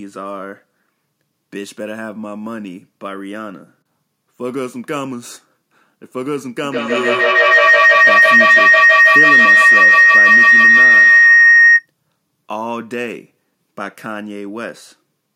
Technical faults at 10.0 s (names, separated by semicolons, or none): feedback howl